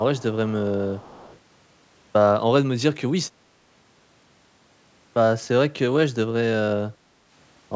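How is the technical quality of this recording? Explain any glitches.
The recording has two distinct glitches, both in the first second and a half, on speech that otherwise carries the normal call microphone processing with nothing above 8 kHz.

From 0.00 to 0.23 s the speech is suppressed in double talk. The level dips by around 15 dB, for roughly 150 ms in total. The likely cause is an echo canceller that heard both ends talking at once, could not separate the local talker from loudspeaker echo, and turned everything down.

Echo leak follows at 0.15 to 0.35 s and again at 0.94 to 1.39 s. A faint copy of the speech returns 288 ms late, about 30 dB below the direct sound, likely because a loudspeaker's output reached the far microphone and its canceller let some through. The steady 288 ms lag and the weak level set it apart from room reverberation, which would follow the speech at once and decay smoothly.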